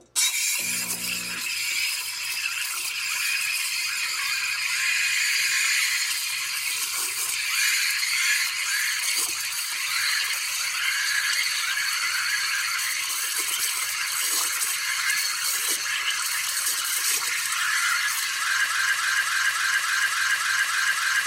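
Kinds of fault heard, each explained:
Broken-record loop: From 18.66 s to the end, one 0.28 s fragment repeats nine times. A stalled player likely resent it, losing the real sound.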